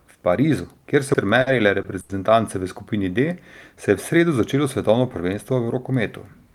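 At 1.14 s a CD skip interrupts the speech: the pickup laser jumped to a different turn of the disc's spiral, so the player mutes for a very brief instant and resumes from another point, heard as a tick followed by a discontinuity.

Short stalls from late packets follow at 1.41–1.48 s, 1.82–1.86 s and 2.00–2.11 s. Each time the jitter buffer emptied, and the receiver stretched the last sound for 50 ms, 20 ms and 90 ms, then continued from the same place. Nothing is lost, but the sound holds unnaturally, and playback lands later each time.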